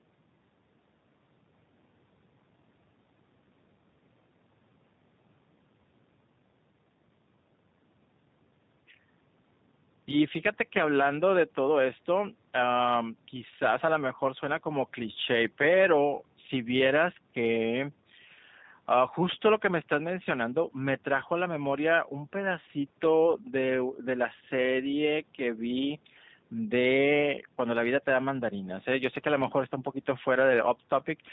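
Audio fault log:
throughout, G.729 codec: The speech sounds plainly rough and synthetic, as if rebuilt from a vocal tract filter, pitch predictor and a few pulses per short frame, which fits an 8 kbit/s G.729 codec. Nothing above 4 kHz survives, leaving it dull and band-limited.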